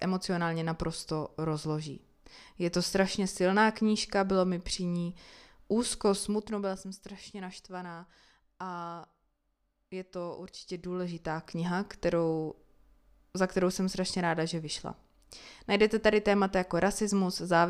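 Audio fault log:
6.12–6.96 s, zipper noise: right after "mi při ní úzko" the level drops by roughly 10 dB in steps of about 1 dB, around 30 a second, with no smoothing, so each jump leaves a tiny click and you hear a fast ticking over the speech until "naštvaná a".
10.56–11.6 s, zipper noise: after "je to" the level climbs back by roughly 10 dB in similarly unsmoothed steps at about the same rate, so the same zipping returns while the gain moves.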